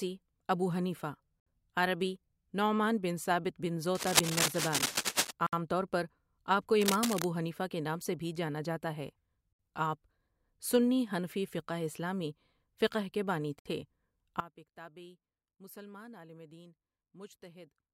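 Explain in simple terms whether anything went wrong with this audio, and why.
Yes, three kinds of fault are audible.

Cable scratch noise: a worn cable, plug or control was likely moved or jostled, so its electrical contact flickered. That puts rough scratching over the speech from 3.95 to 5.31 s, about as loud as the speech itself, and again, more quietly, from 6.81 to 7.24 s.

Gap at a join of encoded pieces: the recording was compressed in separate chunks and stitched together without trimming the padding each chunk carries at its edges. At 5.47 s and 13.59 s the speech drops out for 63.5 milliseconds, then resumes where it left off.

One channel inverted: from 14.40 s to the end, one stereo side was likely flipped upside down electrically. When the two sides combine into one, the matching centre sound cancels out, so the speech suddenly turns much quieter.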